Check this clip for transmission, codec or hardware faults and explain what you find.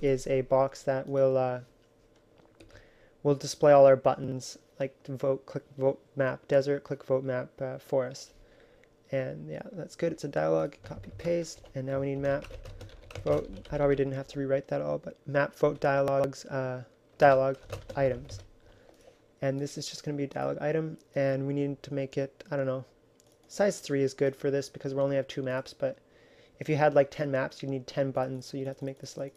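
Two moments of chunks out of order, at 4.24 to 4.32 s and 16.08 to 16.24 s. In each, a 40 ms block plays late, one block behind at 4.24 s and three behind at 16.08 s. Every joint is a hard edge, so each spot sounds jumbled. Unlike a dropout, nothing goes silent or missing. The same material is simply reshuffled, so there is no gap.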